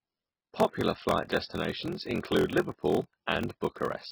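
Throughout the speech, the sound turns watery and swirling. This is likely heavy MP3 compression at a very low bitrate, near 16 kbps.

A block size mismatch (padded) also runs throughout. Short zero-filled gaps recur, buzzing at 43.1 Hz, which fits a 1024-sample read. Playback runs slow, at 0.861 times speed, with pitch near normal.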